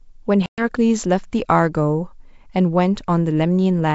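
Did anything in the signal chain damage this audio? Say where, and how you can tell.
Yes, network packet loss on an ADPCM call: a hard-edged silent hole from 0.46 to 0.72 s, several packets gone, leaving the decoder's predictor and step size out of step.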